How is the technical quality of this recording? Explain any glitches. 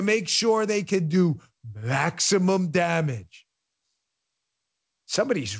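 No glitches can be heard in this speech recording.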